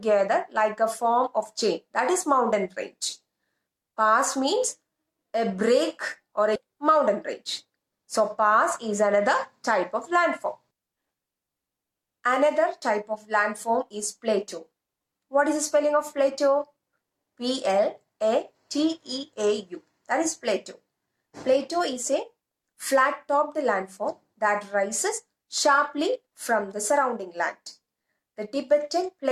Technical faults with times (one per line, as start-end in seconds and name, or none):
6.55-6.66 skip ahead
7.44-8.20 jitter buffer speed-up